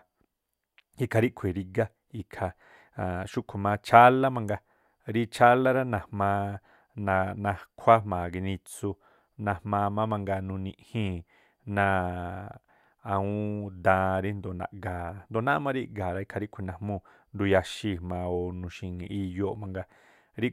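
Nothing goes wrong anywhere in this bit of speech; there's no fault to point to at any moment.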